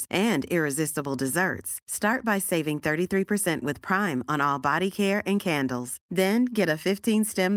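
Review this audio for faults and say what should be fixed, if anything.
No faults found; nothing needs fixing.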